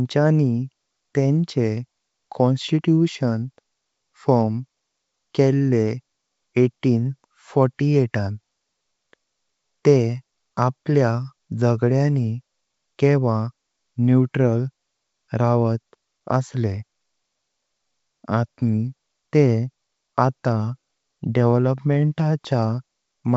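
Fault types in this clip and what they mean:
Nothing stood out on listening to this speech clip.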